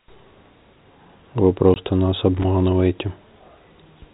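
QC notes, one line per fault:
1.74–1.76 s, packet loss filled with silence: one stretch of the stream never arrived, and the receiver played nothing in its place. The result is a clean 20 ms hole in the speech, consistent with a single lost packet, with abrupt edges on either side.
2.37–2.45 s, loose connector crackle: a poor contact in the cabling briefly made and broke the circuit for about 80 ms. Each interruption and reconnection chops the signal, producing an irregular scratchy burst layered over the narrowband telephone-coded speech.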